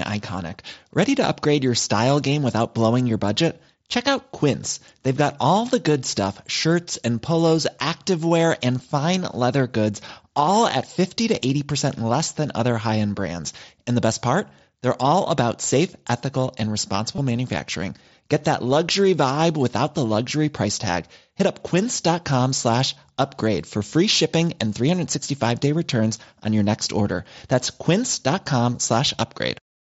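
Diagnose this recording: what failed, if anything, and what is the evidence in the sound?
Packets on the Bluetooth radio link between headset and phone were dropped, and the receiver concealed each loss by repeating the best-matching recent stretch of waveform. This concealed Bluetooth headset packet loss shows as a brief buzzy hold at 17.16 to 17.18 s and again at 21.38 s.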